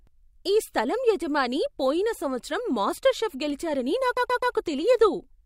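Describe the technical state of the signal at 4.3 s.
At 4.3 s the speech is inside a run of repeated frames from 4.16 to 4.54 s: a block of about 128 ms of compressed audio was delivered again, playing three extra times right after "సంవత్సరం మాస్టర్ షెఫ్ గెలిచారని". The result is an audible stutter, and the clip runs 384 ms longer.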